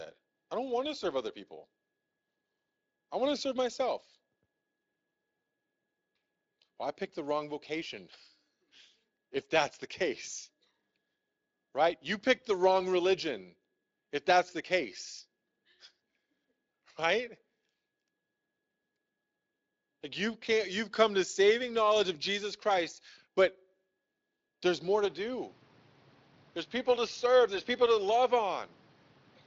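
Speech, carried through a lightly working Speex codec, has its input likely switched to a poorer device at 25.05 s, just after "there's more": the top end dulls to about 6.7 kHz and a faint new background noise appears, at unchanged level.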